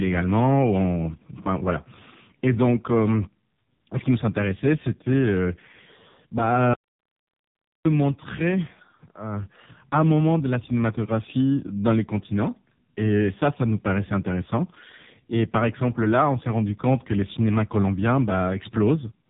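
From start to finish the speech carries heavy AMR narrowband mobile codec damage: nothing passes above 3.8 kHz, and the voice sounds buzzy and synthetic, which fits one of the codec's lowest bitrates, near 5 kbps. A spectrogram shows a hard ceiling with empty space above it.

From 6.74 to 7.85 s there is an audio dropout to silence lasting about 1.1 s. The speech stops abruptly and returns mid-flow, with no room tone in between. The likely cause is lost input, written out as silence. The waveform shows a flat line, and the spectrogram shows a fully blank vertical band.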